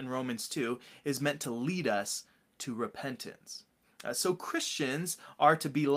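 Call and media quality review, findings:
Lost packet rebuilt from error correction, 1.43–1.45 s, between "is meant" and "lead us to repentance": one 20 ms frame decoded from Opus in-band FEC copy, so no gap but brief rougher, noisier texture.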